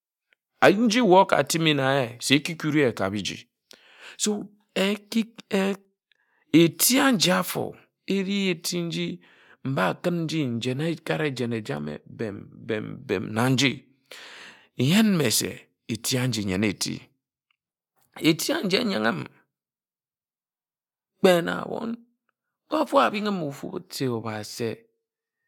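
No technical faults are audible anywhere in the speech recording.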